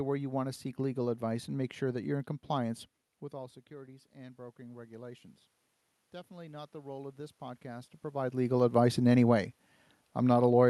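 After "that you're in compliance", the level drops as the talker moves back from the microphone at about 3 s, and automatic gain rising follows from 3.3 to 5.3 s: the control sees the input fall by about 17 dB and slowly adds about 4 dB, so voice and room noise swell together. The same slow lift recurs from 6.27 to 8.51 s, ending just before "advice in any way".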